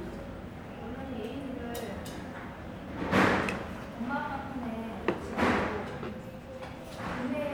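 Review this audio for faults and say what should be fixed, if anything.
Nothing needs fixing; no faults are audible in this audio.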